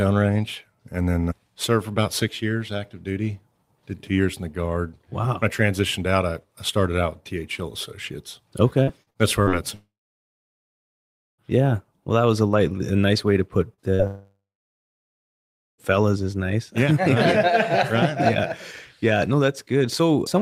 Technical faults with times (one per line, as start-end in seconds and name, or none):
8.83-9.50 repeated packet loss (robotic sound)
9.75-11.41 long network dropout
13.74-14.02 short concealed packet loss
14.07-15.81 long network dropout